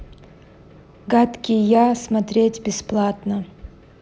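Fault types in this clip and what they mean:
No technical faults can be heard in this speech clip. The recording carries on without any dropouts, clicks, distortion or other transport or device problems.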